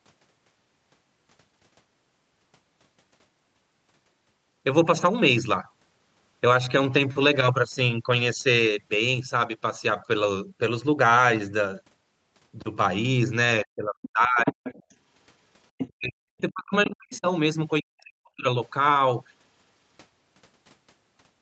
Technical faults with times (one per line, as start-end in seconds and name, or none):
13.64-14.81 speech suppressed in double talk
14.46-14.95 other side's voice leaking through
15.78-15.88 other side's voice leaking through
15.88-17.27 speech suppressed in double talk
16.85-17.18 other side's voice leaking through
17.81-18.45 speech suppressed in double talk